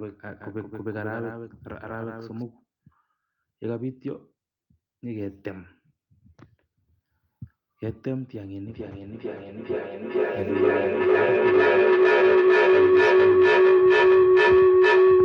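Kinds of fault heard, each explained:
Doubled audio track: From the very start until 2.42 s the speech carries a second, full-band copy trailing roughly 150 ms behind and a few decibels quieter, giving a hard slapback with no reverberant tail or room colour, and it cuts off abruptly. The likely cause is the same signal reaching the mix twice, once through a slower capture path or an edit that leaves two copies out of step.
Feedback howl: From 8.68 s to the end a tone near 400 Hz swells out of the speech, peaking at about 14 dB above it and pulsing roughly every half second. Sound from a loudspeaker is being picked up again by a microphone on the same call, and each trip round that loop adds level. The repeats therefore grow rather than fade and narrow to the frequency the loop favours, sustaining the howl until the clip ends.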